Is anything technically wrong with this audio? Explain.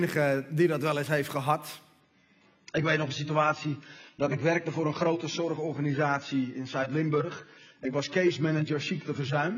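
Yes. From 2.01 s to the end, an adaptive stream at a lower bitrate takes over, sounding like a drop from 96 to 16 kbit/s AAC as the connection slowed. The sound turns dull and swirly with no gap. A spectrogram shows nothing above 7 kHz, and the waveform stays continuous.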